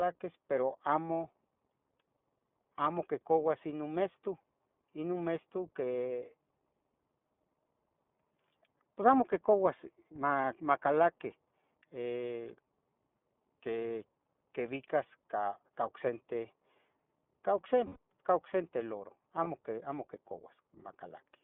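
The whole clip runs through the iLBC codec. The speech sits in a narrow telephone band of roughly 150 Hz to 3.5 kHz, and the top is cut off sharply. Each 20 ms block is coded independently, which leaves a plainly audible rough, slightly synthetic edge on the voice, consistent with the 15.2 kbps mode. Unlike the smeared, watery sound of a heavily compressed wideband codec, the damage here is a narrowband coarseness.

Lost iLBC frames occur four times: 10.42 to 10.45 s, 13.88 to 13.90 s, 17.86 to 17.97 s and 19.44 to 19.48 s. The first, second and fourth are short and fit a single missing 20 ms frame. The third lasts about 100 ms, which points to several frames lost in a row. In each gap the decoder repeats the last pitch cycle with added noise, producing a held, faintly buzzy vowel that fades over the longer loss. A dropout would leave silence, and a click would be instantaneous. Here the gap is filled with sound, and the voice is clean again right after each one.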